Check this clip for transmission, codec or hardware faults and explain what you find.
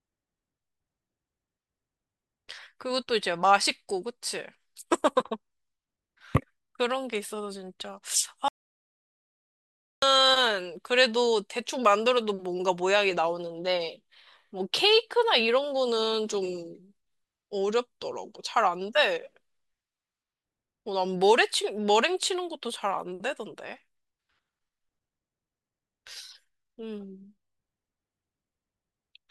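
One fault is present: an audio dropout to silence from 8.48 s to 10.02 s, losing about 1.5 s of speech. The speech cuts off mid-flow into silence with no room tone, then resumes abruptly, most likely because the input link failed while the recorder kept writing silence.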